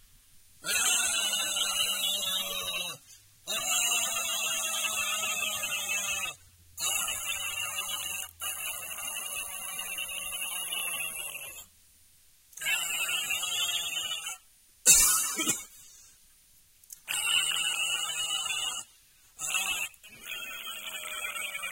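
New audio failed to reach the playback device in time at 8.62 to 8.64 s and again at 10.80 to 10.82 s in this recording of sounds, so each time the device played its last buffer once more. Each repeat is a brief stutter of about 23 ms with a hard join, which fits a 1024-sample buffer. This is a repeated buffer fault, and virtually nothing seems to be skipped.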